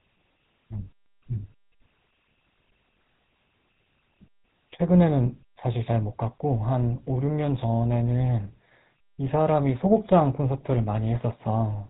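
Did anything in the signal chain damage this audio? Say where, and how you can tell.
Yes, at the codec stage. GSM full-rate codec artefacts run throughout the speech. The voice is buzzy and gravelly, with nothing above 4 kHz, which fits 13 kbps pulse-excited coding.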